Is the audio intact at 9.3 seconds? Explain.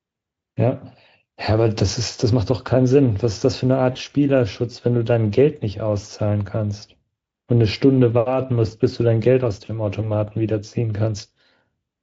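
Yes, the speech at 9.3 seconds is intact, with no fault at that moment, and the Speex coding there leaves at most faint traces.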